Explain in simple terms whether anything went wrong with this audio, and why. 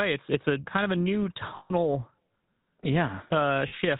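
The speech has passed through the GSM full-rate codec, an early mobile-phone coder that rebuilds the voice from a simple vocal-tract model driven by coarse pulses. That causes the plainly audible buzzy, gravelly roughness and cuts everything above 4 kHz, so the sound is dull.

Two stretches suffer lost GSM frames, at 1.56 to 1.71 s (about 140 ms) and at 3.68 to 3.76 s (about 40 ms). The decoder held and repeated the last good sound, so each gap is a short, rough metallic ring.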